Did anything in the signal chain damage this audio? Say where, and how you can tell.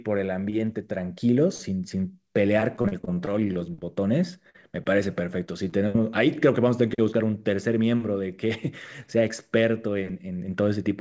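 Yes. Repeated packet loss (robotic sound) on the network leg from 2.76 to 3.84 s: ten short gaps, none longer than about 32 ms. Each was patched by extending the last sound, so about a fifth of that stretch is synthetic. The result is choppy, with slivers of speech missing.

A burst of packet loss at 4.50 to 4.56 s. Roughly 40 ms never arrived in time. The receiver held and faded the preceding sound for about 46 ms, giving a brief buzz or hiss, then jumped ahead past the lost section.

Short concealed packet loss at 5.46, 5.69 and 5.92 s, each about 20 ms of lost audio. The jitter buffer filled each hole with a continuation of the prior pitch or noise and blended back, heard as a quick smear or wobble. The G.722 call path limits everything to below 8 kHz.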